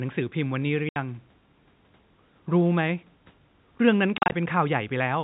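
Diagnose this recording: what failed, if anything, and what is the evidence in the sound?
The failure is in the network: packet loss filled with silence. At 0.89 s the speech drops into a clean 70 ms hole that ends at 0.96 s. From 4.18 to 4.32 s, 100 ms goes missing in several short gaps spread over 140 ms, the longest run being 40 ms. Each gap starts and stops abruptly. The receiver had nothing to play and inserted silence. The gap lengths point to 10 ms packets, heard through the narrow G.711 telephone band.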